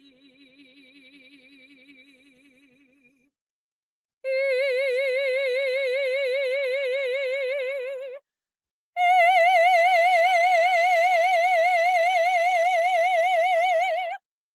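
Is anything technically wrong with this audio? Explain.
Yes, a speech-style noise suppressor was left running on this music, and it's doing real damage.

The noise suppressor applied to music or sounds is active for the whole clip. It treats sustained tones, room ambience and reverb tails as background noise and pulls them down, while attacks slip through. So the level keeps swinging, by roughly 15 dB, which makes held notes pump and flutter and leaves the decays sounding thin and clipped short.

The worst stretch is from 0.0 to 3.3 s, where the sound is cut by the noise suppressor for about three seconds in total. The suppressor decides the opening material is noise and clamps it, with the deepest dip about 22 dB down. You hear the start sink and hollow out, with sustained parts fading out before they should.

The audio also passes through a WebRTC call path with Opus, which tops out around 12 kHz, so the highs above that are simply absent.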